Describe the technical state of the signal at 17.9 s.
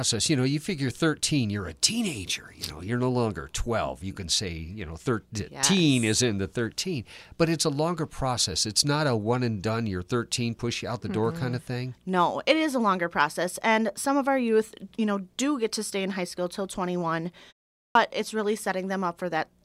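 At 17.89 s the signal shows a clipped start after a pause: roughly the first 62 ms of sound, through 17.95 s, never reaches the output. After the preceding 0.45 s of silence the playback device had gone idle, and it needed that interval to wake and resynchronise before passing audio again. The words "it's really" therefore begin abruptly out of silence, with their opening sounds swallowed and no natural onset.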